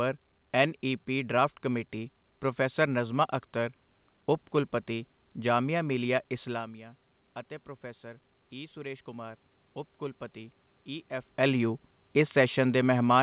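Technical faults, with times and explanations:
8.01 to 11.38 s, automatic gain rising: after the speech level at the microphone falls by about 14 dB, as the talker moves away around 6.5 s, the gain control treats the input as too quiet and slowly raises its gain by about 4 dB over 3.4 s. Voice and room noise swell together through the band-limited, nothing-above-4 kHz sound of the G.711-like call path, recovering only part of the lost level before the talker moves again near 11.0 s.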